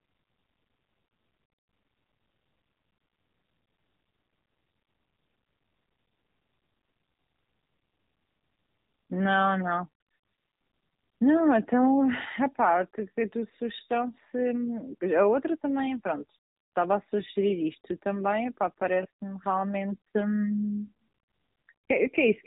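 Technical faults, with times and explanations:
Throughout: AMR narrowband mobile codec. The speech has passed through the narrowband mobile speech coder, and the damage is plainly audible. Nothing above 3.8 kHz survives, so sibilants and consonant edges sound dull and boxed in. The coder models the vocal tract and drives it with a few pulses per short subframe. At this low rate, which fits the 7.4 kbps mode, too few pulses are spent, and the voice turns buzzy and synthetic.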